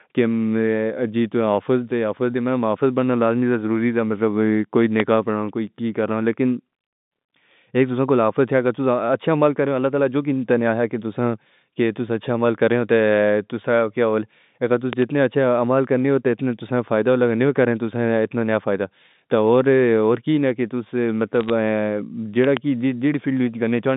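At 5.00 to 5.02 s, just before "پڑھاؤ کوئی", a loud pop jumps about 15 dB above the speech. A double pop follows at 14.93 to 15.04 s, before "اچھا عمل کرنی ہوتی", and another pair at 22.44 to 22.59 s. The likely cause is a voltage spike, such as a plug, switch or static discharge, added to the signal. Speech continues underneath each thump.

From 21.41 to 21.50 s, bit errors on the digital phone line add a short burst of crackle. Scattered flipped bits corrupt single samples, and each hit on a high bit gives a sharp tick. The speech keeps its narrow G.711 telephone band underneath.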